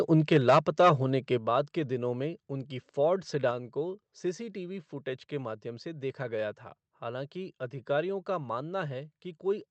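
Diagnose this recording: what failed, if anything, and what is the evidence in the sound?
From 0.14 to 0.9 s the loudest peaks sound flattened and crackly. That's microphone overload, likely input gain driving the converter about 7 dB past full scale, clipping a few percent of samples.

At 1.38 s everything drops abruptly by about 6 dB. That's the microphone volume stepped down, likely call processing reacting to the earlier clipping by cutting input gain in one go.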